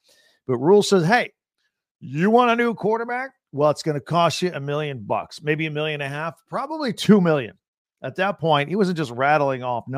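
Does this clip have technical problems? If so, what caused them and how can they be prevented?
No, no technical faults present.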